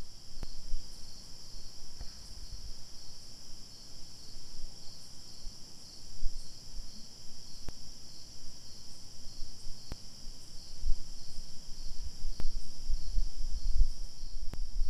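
At 0.43, 7.69, 9.92, 12.40 and 14.54 s there's a DC step: the zero line jumps by about -28 to -26 dBFS, then drains away through a 5 Hz high-pass. Each one lands as a low thump under the unchanged sound.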